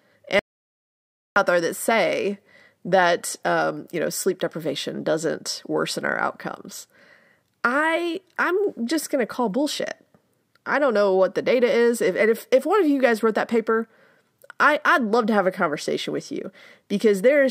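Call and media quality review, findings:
Audio dropout to silence, 0.39–1.36 s: about 0.97 s of silence, no room tone, flat-line waveform, blank spectrogram column. Likely input loss or mute upstream; speech content in gap lost.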